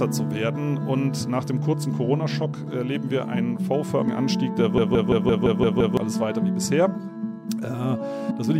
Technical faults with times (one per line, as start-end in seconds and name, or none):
2.44 compressed frames skipped
4.06 compressed frames skipped
4.78-5.97 system hang loop
6.94 compressed frames skipped
8.30 compressed frames skipped